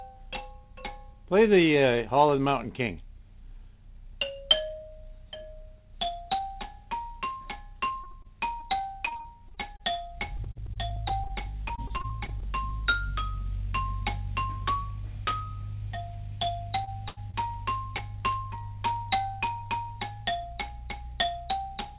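You get a call-path recording, G.711 mu-law by the sound of it, with nothing above 4 kHz. From 7.88 to 12.46 s there's repeated packet loss, giving that choppy robotic sound: 33 small holes, none longer than 41 ms, each patched by stretching the last bit of audio. About 0.62 s goes missing in all. Overlapping that, from 9.84 to 12.71 s, a jitter buffer slow-down stretches things by about 54 ms, so playback drops to 98% speed without any change in pitch. Later there are three short concealed packet losses, at 16.84 to 16.89 s, 17.30 to 17.35 s and 17.97 to 18.00 s. Each one drops about 20 ms, smoothed over by a brief continuation of the preceding sound. Between the first two, at 17.09 to 17.18 s, a burst of packet loss leaves a 76 ms fill that holds and fades the last sound while 80 ms of real audio disappears.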